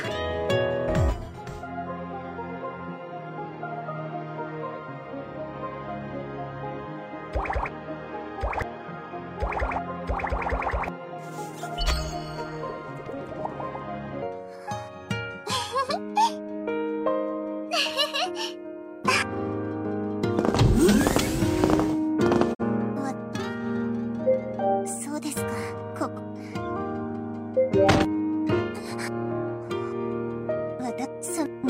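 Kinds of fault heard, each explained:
Digital broadcast dropout: at 22.53 s the sound fades over 20 ms and stays silent until 22.62 s, which fits the receiver muting one corrupted frame.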